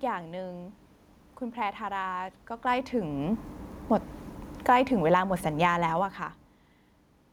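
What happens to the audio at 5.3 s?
At 5.3 s the automatic gain is falling. Between 4.53 and 5.79 s the gain control, having judged the input too loud or its background noise too strong, eases its gain down by about 5 dB, so the speech and the room noise behind it sink together.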